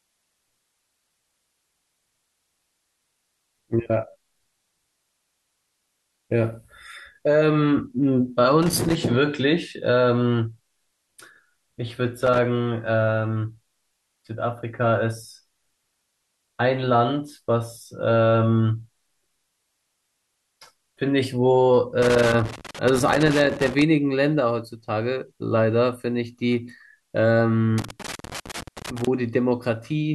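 Loose connector crackle breaks into the speech at 8.63–8.95 s, 12.23–12.39 s, 22.02–23.82 s and 27.78–29.07 s. A worn or dirty contact keeps making and breaking as it shifts, chopping the signal into irregular scratchy bursts, and the longer third and fourth stretches crackle longest.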